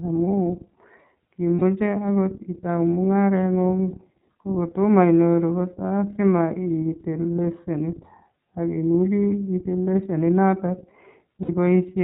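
iLBC codec, throughout the whole clip: the speech passes through a narrowband VoIP codec that codes each frame's excitation independently, so nothing above 4 kHz survives and the voice sounds muffled and band-limited. The coding damage is plainly audible as a rough, slightly synthetic texture. The character fits iLBC's 13.33 kbps mode with 30 ms frames.

Lost iLBC frames, at 1.56 to 1.62 s and again at 11.43 to 11.49 s: each gap lasts about 60 ms, consistent with two consecutive 30 ms frames dropped. The decoder fills the hole by repeating the last pitch cycle mixed with noise, so each gap sounds like a briefly held, buzzy, breathy vowel. Since iLBC frames stand alone, the voice is right again almost at once, as heard with "akoot itau" right after the first gap.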